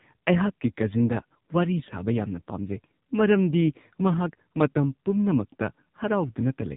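AMR narrowband mobile codec throughout: a vocal-tract model with sparse pulses at 8 kHz sampling leaves nothing above 3.8 kHz, leaving buzzy, synthetic speech whose heavy damage points to a bitrate near 6 kbps.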